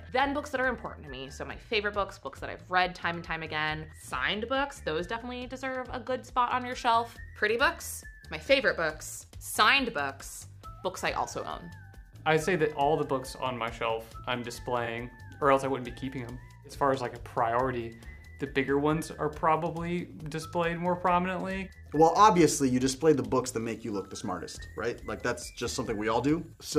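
From 0.0 to 6.67 s, de-emphasis is applied wrongly. A treble-cut filter meant to reverse a pre-emphasis boost acts on audio that was never boosted, or cuts a second time, so it takes away high end that belonged there. The response falls smoothly with frequency, ending about 8 dB lower at 10 kHz than at 1 kHz. The opening stretch sounds dull and muffled, as if heard through cloth, until the top end returns after 6.67 s.

At 14.85 to 14.88 s there is a concealed corrupt frame. Bit errors damage the coded audio, and the AAC decoder detects them and covers the gap itself instead of playing garbage. The concealed stretch lasts about 36 ms, which fits a few damaged frames in a row. The same fault recurs at 18.65 to 18.69 s, again about 36 ms long, here pointing to a single lost frame.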